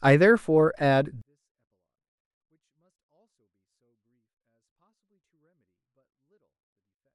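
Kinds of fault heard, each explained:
24-bit alignment error (too quiet): from 1.22 s to the end, the speech drops about 48 dB at once because low-byte 24-bit samples are read as full 32-bit words.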